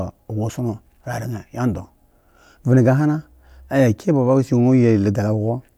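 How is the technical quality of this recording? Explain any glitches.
No audible glitches turn up anywhere in this recording.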